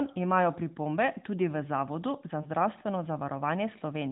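A lost AMR speech frame at 2.42 to 2.47 s: a brief dip or warble in the speech, consistent with a single dropped 20 ms frame. The narrowband decoder filled the gap by reusing the previous pitch and vocal tract settings at reduced gain, before recovering.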